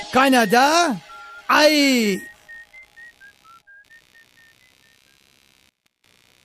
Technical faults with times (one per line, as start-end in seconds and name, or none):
0.00-6.45 computer activity noise